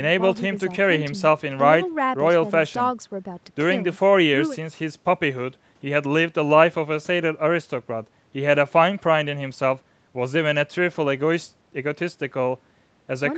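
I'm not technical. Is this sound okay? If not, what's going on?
Yes, nothing stood out on listening to this speech recording; it simply has the slightly narrower, call-like sound you'd expect from audio sent over an online call.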